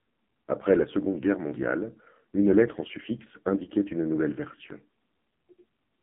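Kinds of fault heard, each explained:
AMR narrowband mobile codec: The speech sounds heavily buzzy, thin and synthetic, confined to roughly 150 Hz to 3.4 kHz with nothing above 3.5 kHz. This comes from rebuilding the voice from a vocal-tract model and sparse pulses, at a rate fitting a low 5.9 kbps mode.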